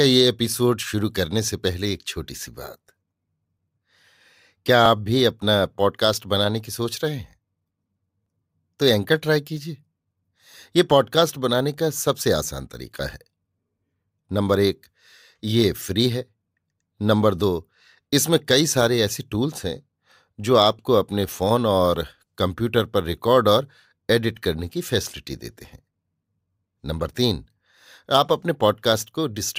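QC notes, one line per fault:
4.86 s and 8.26 s, dropped buffer (overrun): likely the recording program fell behind and the hardware overwrote a block of samples before it was read, so a few milliseconds of audio vanish and the two sides butt together, giving a slight skip in the speech with no gap of silence.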